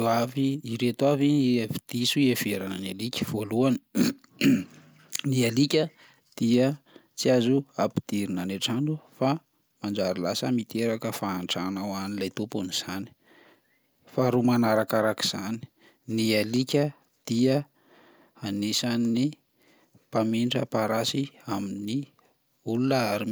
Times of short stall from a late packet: none

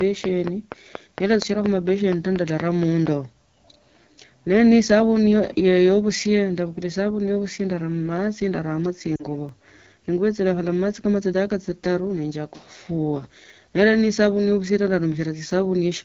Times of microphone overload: none

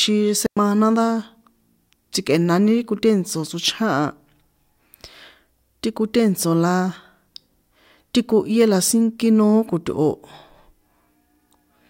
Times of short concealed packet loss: none

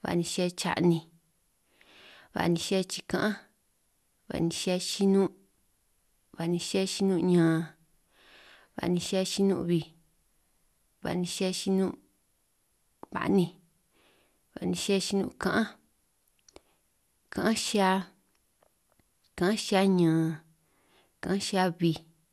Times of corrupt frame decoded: none

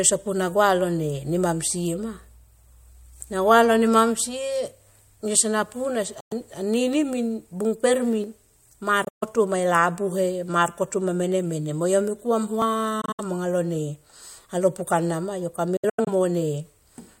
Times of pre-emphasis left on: none

